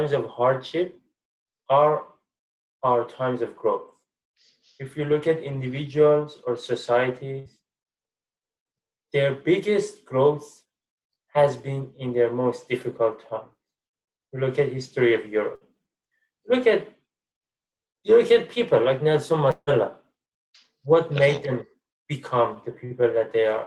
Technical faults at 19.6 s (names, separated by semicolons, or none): long network dropout